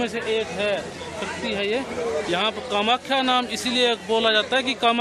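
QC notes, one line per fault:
No technical faults are audible anywhere in the audio.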